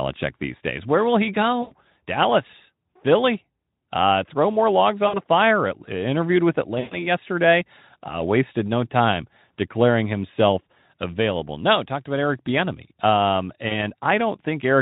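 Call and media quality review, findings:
Buzzy, smeared tone fading out, then weak or rough sound for a moment after recovery: 1.61–1.74 s after "will he" (about 100 ms lost), 5.07–5.19 s after "throw more logs" (60 ms), 6.79–7.07 s (120 ms), 13.67–13.72 s (40 ms). VoIP packet loss concealed by the speech codec. The Speex decoder extends its last pitch and filter with falling gain, and its frame-to-frame state lags after packets resume. Light Speex coding damage at about 15 kbps.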